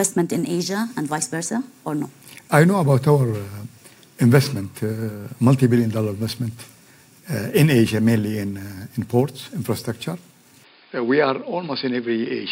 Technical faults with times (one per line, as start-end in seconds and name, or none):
10.64-12.52 input switched to a poorer device